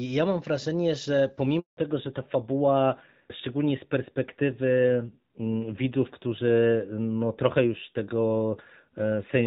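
Speech on a phone call, with a handover gap from 1.59 to 1.77 s, just after "mam wrażenie że". During the network switch no frames arrived for 180 ms, so the waveform collapses to a flat line. From 1.77 s to the end there is a fallback to narrowband. The spectrogram shows everything above 4 kHz abruptly cut away, and the voice turns duller and rougher. This fits a drop from HD Voice AMR-WB at 12.65 kbit/s to AMR-NB at 7.4 kbit/s.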